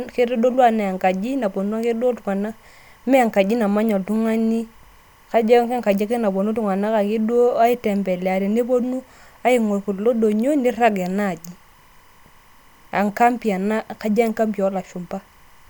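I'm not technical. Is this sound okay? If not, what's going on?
No, not quite. Under the speech, from start to finish, there's timecode bleed: a synchronisation signal from a nearby track or cable has leaked in. It flips between two high pitches, around 1 and 2 kHz, at 25 frames per second, which you hear as a faint, steady chirping warble.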